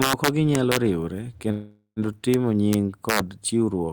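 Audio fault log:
0.02–0.77 s, 2.34 s, 2.73–2.74 s and 3.09–3.19 s, integer overflow: on these loud passages the sample values run past the top of the integer range and wrap round to the opposite extreme instead of being held at the limit. Each peak that crosses over jumps the full range, so the sound cracks far more harshly than clipping would. The first stretch is driven about 4 dB over and the last about 2 dB, so they crack hardest.
1.51–1.99 s, call audio freeze: the sound stalls and is carried on as a buzzy or hissy, fading continuation of its last moment for about 450 ms, with roughly 70 ms of that falling silent. It then resumes exactly where it stopped, with nothing lost, so the rest of the clip arrives about 450 ms later. This points to packets likely held up in transit, leaving the jitter buffer empty.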